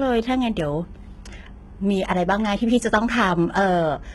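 Speech, heavily compressed throughout. Nothing sounds above about 11.8 kHz, and the treble is gritty and lispy. This is likely HE-AAC compression rebuilding the highs, consistent with roughly 16 kbps.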